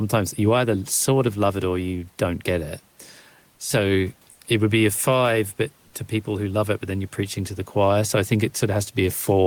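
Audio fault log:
4.31–4.39 s, comfort noise in place of the background: for about 80 ms the room noise (sitting around 38 dB below the speech) drops out and is replaced by a smooth, featureless hiss roughly 5 dB different in level, then the real background snaps back. That's the likely signature of discontinuous transmission, something like Opus DTX, where the sender goes quiet in a pause and the receiver fills the gap with generated noise shaped only loosely like the room.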